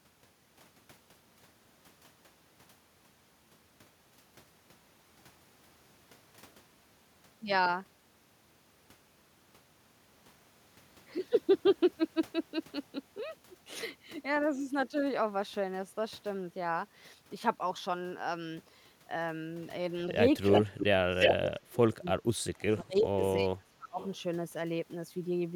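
Echo leak first appears at 20.46 to 20.62 s: a copy of the speech returns about 342 ms late, roughly as loud as the talker. It is likely a loudspeaker on the far end whose echo canceller failed to remove what its microphone picked up, so that residue was sent back. Further short scraps follow at 20.78 to 20.85, 21.2 to 21.49 (louder than the speech itself), 22.97 to 23.01 (very faint) and 24.0 to 24.17 s (quiet), always at the same 342 ms lag.

Speech suppressed in double talk overlaps those returns, from 20.67 to 23.22 s and again from 23.42 to 23.99 s. With both sides sounding at once, the echo canceller likely could not tell the local talker from the loudspeaker echo and turned everything down. The speech dips by as much as about 30 dB and drops out in pieces, for around two seconds in the first stretch and about half a second in the second.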